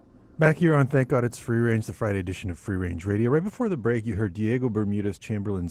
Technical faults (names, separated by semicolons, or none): Opus voice compression